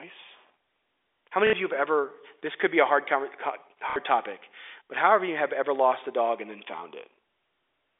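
At 1.47 s, just before "you have ever this", packet loss with the last packet repeated breaks the sound for 60 ms. The receiver kept replaying the last good packet until fresh audio arrived. The loops do not match the pitch period, and the run turns into a brief robotic stutter. The same fault returns at 3.90 s for 60 ms, right before "topic but however you". Both stutters sit inside narrow telephone-band G.711 audio.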